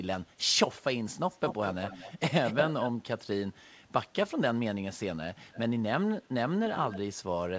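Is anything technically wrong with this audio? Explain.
Yes, there is an echo leak. A fainter delayed copy of the speech returns at 1.29–1.71 s, 1.87–2.14 s and 2.44–2.91 s, lagging by 220 ms, then at 5.51–5.59 s and 6.87–6.98 s, lagging by 290 ms. It sits roughly 5 to 20 dB below the direct speech. The likely cause is a loudspeaker-side echo canceller passing microphone pickup back into the call.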